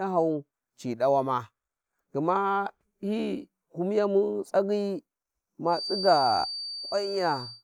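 From about 5.64 s right through to the end of the speech, a thin, steady whistle at roughly 4.6 kHz sits behind everything, around 10 dB under the main signal and swelling and fading slowly in level. That's a feedback whistle. The likely culprit is a loudspeaker-to-microphone loop hovering just at the edge of feedback, so a single frequency keeps ringing without ever building into a full howl.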